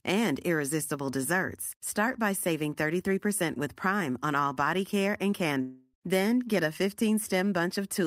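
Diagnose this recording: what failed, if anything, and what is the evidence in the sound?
From 5.61 to 5.95 s the speech turns into a fading buzz, the last sound stretched for about 320 ms, then resumes with that stretch gone. This is likely a long network dropout. Unlike brief packet loss, the concealment lasts a third of a second and the lost audio never returns.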